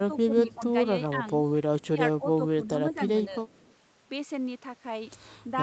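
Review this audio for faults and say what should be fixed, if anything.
Speech suppressed in double talk: when both sides spoke at once, the echo canceller likely could not separate the local talker from loudspeaker echo and attenuated everything. The speech dips by up to about 10 dB at 0.0–0.61 s, 1.1–1.19 s, 1.83–2.98 s and 3.29–3.48 s. Tune the double-talk detector so it freezes adaptation instead of ducking the near-end talker.

Echo leak: the loudspeaker side's echo canceller left part of its microphone pickup uncancelled, likely because of incomplete echo-path modelling, and that residue was sent back. A faint copy of the speech returns 207 ms late. It is about 20 dB below the speech at 0.47–0.55 s and about 35 dB below at 1.81–1.87 s and 3.49–3.75 s. Strengthen residual echo suppression and let the canceller converge fully on the 207 ms path.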